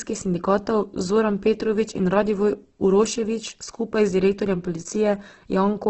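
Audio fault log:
Throughout: Opus compression. The speech sounds rough and grainy, with nothing above 8.2 kHz. This is likely the encoder filling starved bands with folded or noise content at a rate near 12 kbps. On a spectrogram, upper bands look speckled and noisy and stop abruptly at the cutoff.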